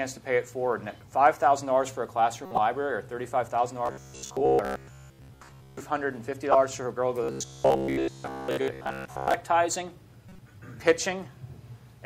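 Corrupt frames were decoded at 2.45–2.58 s, 6.52–6.55 s and 10.29–10.39 s. The decoder played damaged compressed frames, one to four at a time, as if they were intact, so energy lands at wrong frequencies in short chirps or noise bursts. The last peaks at about -35 dBFS and the others at about -10 dBFS.

Robotic sound from repeated short buffers runs from 3.86 to 5.80 s and again from 7.24 to 9.34 s. The likely cause is new audio arriving too seldom, so a short stretch of about 15 ms is replayed while most of the real audio is skipped. This turns the sound into a rigid, metallic 66.8 Hz buzz.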